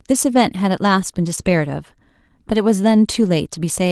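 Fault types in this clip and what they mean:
Short concealed packet loss: About 20 ms of the speech stream reached the decoder too late, so it carried the preceding sound forward for roughly 17 ms and then blended back, stretching the passage by around 10 ms. Between 1.35 and 1.44 s this leaves a brief smear.
Lost packet rebuilt from error correction: Lost audio was replaced by the low-bitrate backup copy carried in the following Opus packet, so nothing drops out. The rebuilt stretches, 20 ms near 1.37 s and 80 ms from 3.14 to 3.28 s, sound rougher and noisier.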